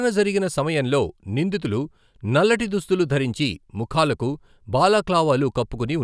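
Just speech here, and nothing in it is technically wrong at any point.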